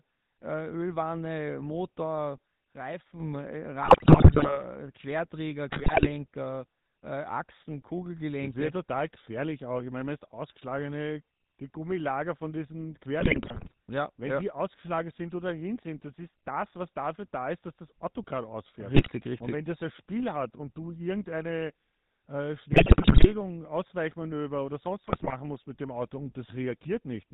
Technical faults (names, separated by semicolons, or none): GSM full-rate codec; sudden gain jump; GSM bit errors